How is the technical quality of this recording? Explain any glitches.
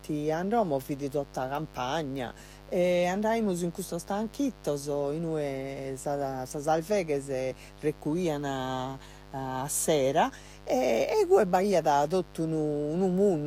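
The recording's quality is compromised by one fault that runs the whole length of the speech.

Mains buzz, throughout: sharp switching spikes from a dimmer, rectifier or unshielded line enter twice per 50 Hz cycle, producing harmonics of 50 Hz that reach up to several kilohertz. The result is a steady, raspy buzz sitting roughly 20 dB below the speech.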